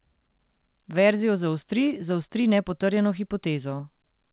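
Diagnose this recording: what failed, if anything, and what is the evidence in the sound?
Nothing in the recording points to a failure at any stage: the speech arrives as ordinary A-law G.711 telephone audio at 8,000 samples a second, with the narrow telephone bandwidth and faint level-following quantisation hiss that this coding normally carries.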